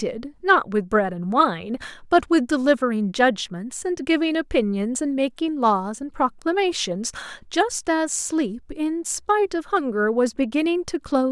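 No technical faults can be heard anywhere in the speech recording.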